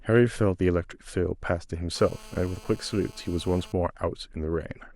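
At 1.96 s a GSM phone buzz starts and runs steadily until 3.72 s, sitting about 23 dB below the speech. A nearby 2G handset in a call is pulsing its transmitter about 217 times a second, and the audio circuitry rectifies those radio bursts into a hard, raspy buzz with a dense stack of harmonics. Mains hum is smoother and sits at 50 or 60 Hz. This tone's 217 Hz fundamental and its gritty, chattering edge mark it as radio interference.

At 2.56 s, inside the buzz, a brief blip marks damaged data in a compressed stream. Corrupted bytes made the decoder misread a frame, lose sync and hunt for the next valid header, so the sound is disrupted for a moment. A plain dropout would leave a silent gap, and a simple click is a single sharp spike. This fault points to the decoder misreading corrupted frames and not to a break in the signal path.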